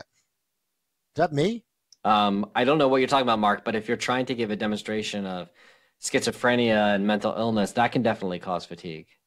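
No technical faults are audible anywhere in the speech recording, so there is nothing to log.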